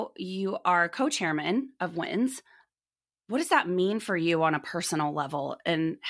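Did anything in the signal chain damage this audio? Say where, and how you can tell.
No, nothing along the way seems to have done this speech any harm, and there's no sign of trouble at any stage of the chain.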